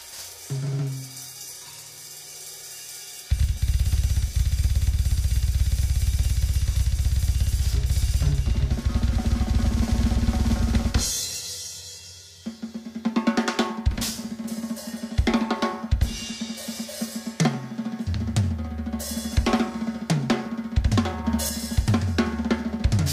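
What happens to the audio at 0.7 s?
Nothing goes wrong at 0.7 s: the audio there plays through cleanly, with no dropout, click, distortion or other fault.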